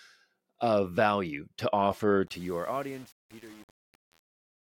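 Right after "of value to offer", from 2.27 s to the end at 4.61 s, there's truncation distortion on the fade-out. The level stage drops bits without dither, roughly consistent with 7-bit resolution, so the tail turns gritty and steppy.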